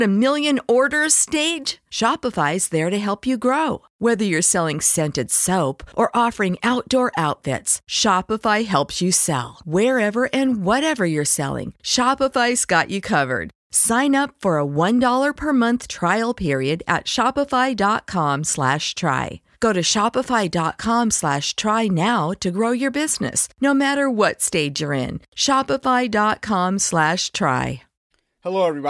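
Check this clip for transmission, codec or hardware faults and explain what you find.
No faults detected in this recording.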